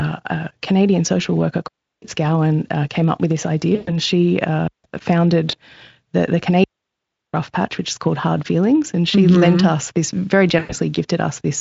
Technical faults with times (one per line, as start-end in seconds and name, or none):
1.68-2.02 digital wireless dropout
3.75-3.97 VoIP packet loss concealed by the speech codec
4.68-4.84 digital wireless dropout
5.51-5.55 VoIP packet loss concealed by the speech codec
6.64-7.34 digital wireless dropout
10.59-10.74 VoIP packet loss concealed by the speech codec